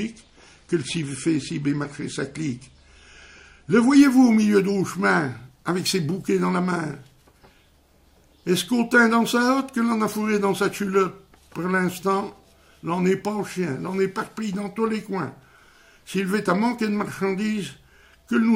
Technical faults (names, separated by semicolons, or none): adaptive stream starting at a low bitrate